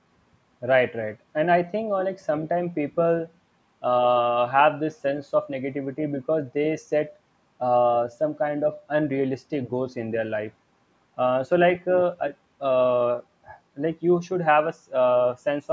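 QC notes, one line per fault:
No faults heard in this speech recording.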